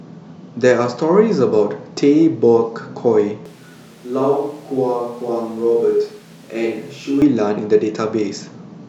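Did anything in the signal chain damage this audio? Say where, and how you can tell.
Yes. At capture, the chain likely switched to a distant microphone from 3.46 to 7.22 s. The speech abruptly turns hollow and roomy, about 5 dB quieter.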